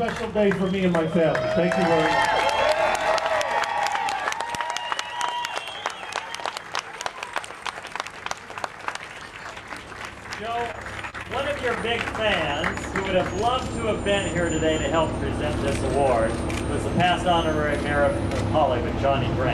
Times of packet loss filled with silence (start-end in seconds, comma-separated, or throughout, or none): none